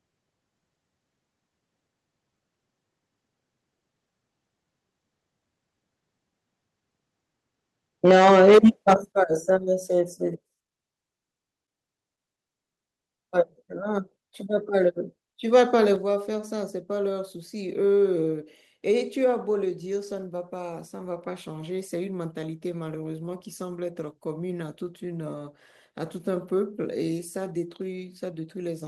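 Microphone overload runs from 8.05 to 8.94 s in this speech recording. The loudest syllables turn harsh and crackly because their waveform tops are flattened, with peaks pushing about 9 dB past the converter's limit and roughly 15% of the samples clipped over that stretch. The likely cause is an input level set too high for the converter, so anything louder than its ceiling is simply sliced off. Microphone volume stepped down is heard three times: at 8.11 s, inside the distorted passage, the whole signal drops by about 4 dB; at 9.12 s it falls a further 9 dB or so; and at 15.96 s it drops again by about 5 dB. Each is an abrupt level change affecting voice and background together, with no gradual fade. This most likely comes from the call software reacting to the overloaded input by cutting the device gain in single steps.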